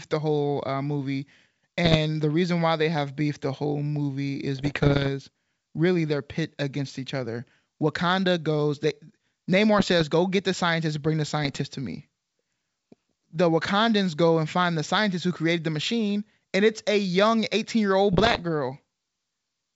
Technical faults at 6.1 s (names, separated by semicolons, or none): none